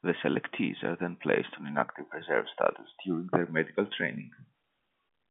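Nothing in this speech recording sounds faulty.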